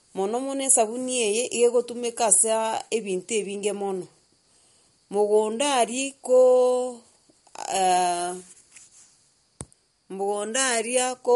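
Throughout the speech, MP3 compression is likely starved of bits, which fits a bitrate around 48 kbps. The encoder discards everything above 11.2 kHz and lets weak frequency lines flicker between frames, giving a plainly audible dull, watery, swirling texture.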